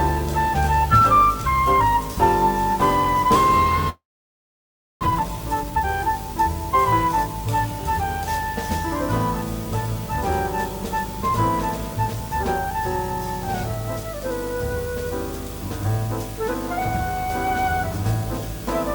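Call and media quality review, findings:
Video or display buzz, whole clip: 50 Hz field-rate buzz with hash, plus a 15.6 kHz line tone, roughly 10 dB under the audio. Screen or video cable coupling into the audio path.

Long network dropout, 3.89 to 5.05 s: the last sound is held as a fading buzz or hiss, then about a second of silence. The audio resumes with roughly 0.6 s gone. Likely a network outage, with delay jumping about half a second.

Jitter buffer speed-up, 5.06 to 8.02 s: plays 115% fast at unchanged pitch, so it sounds hurried. Around half a second is trimmed away in pitch-period slices to drain the backlog. There's a milder pass at 9.65 to 12.29 s, at 102%, trimming about 50 ms.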